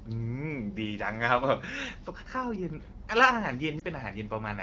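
At 3.79 s the speech briefly dips and warbles. This is a lost AMR speech frame. A single frame is missing, a 20 ms gap. Its data likely failed the checksum after radio errors. The decoder fills the hole by repeating the last good pitch and vocal tract settings at lower gain. So the sound smears for an instant and softens. The gap is short, so it never fades to silence. The voice returns weak or rough for a moment, then recovers. The AMR wideband (HD Voice) coding around it sounds clear, which fits a rate near 12.65 kbit/s.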